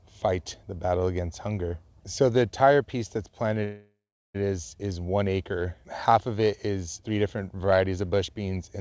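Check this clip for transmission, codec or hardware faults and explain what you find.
One transmission fault is present: a call audio freeze from 3.64 to 4.36 s, right after "the entire piece that's". Packets were likely held up in transit, so the jitter buffer ran dry and the receiver stretched the last sound into a fading buzz or hiss, then about 0.39 s of silence. The 0.7 s gap is inserted rather than cut, so nothing is lost and the sound resumes intact at "is is one acre", just later than it should. Throughout, the band stops at 8 kHz, consistent with a wideband call codec such as G.722.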